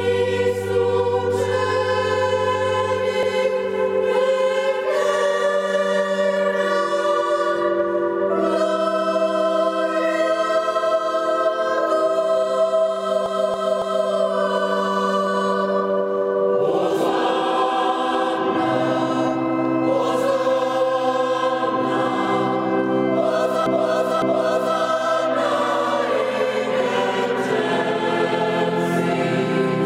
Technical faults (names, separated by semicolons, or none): repeated frames